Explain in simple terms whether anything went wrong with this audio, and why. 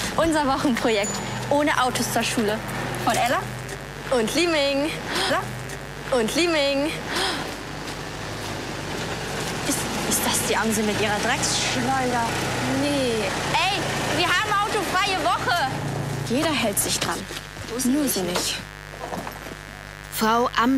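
There's a steady, raspy mains buzz running underneath the whole recording, from the first second to the last. It comes from the electricity supply: something like a dimmer, a power adapter or a poorly shielded cable lets sharp little spikes leak in, twice every cycle of 50 Hz mains. Those spikes carry a stack of overtones reaching well into the kilohertz range, so it's a gritty buzz, fairly loud against the sound itself.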